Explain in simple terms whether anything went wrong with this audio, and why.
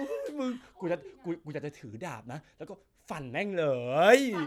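Nothing stood out as wrong when listening to this speech recording.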